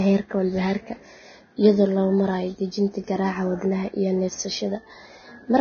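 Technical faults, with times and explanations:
Throughout, Vorbis compression: the speech is grainy and hissy with nothing above 6.5 kHz, likely from a low bitrate near 18 kbps quantising the treble into noise.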